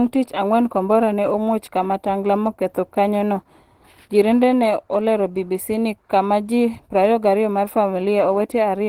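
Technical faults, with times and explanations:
Throughout, Opus compression: the speech sounds hoarse, grainy and somewhat muffled, likely from Opus hybrid speech mode, fitting a low rate near 16 kbps.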